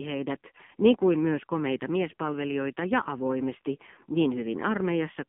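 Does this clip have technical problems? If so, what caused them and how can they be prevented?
Yes. The whole clip has been through the AMR narrowband mobile codec. The speech is squeezed into roughly 150 Hz to 3.4 kHz and sounds heavily buzzy and synthetic, which fits a low bitrate near 5.9 kbps. To prevent it, record or route the call over a wideband or higher-bitrate path.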